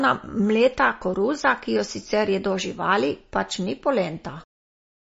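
From start to finish the speech sounds dull and watery, with nothing at all above 7.6 kHz and a swirling, unstable texture in the upper range. The likely cause is heavy MP3 compression, and the damage fits a low bitrate around 32 kbps. With so few bits, the encoder cuts the treble at a fixed frequency and drops weaker frequency components, which flicker in and out between frames and produce that warbling quality.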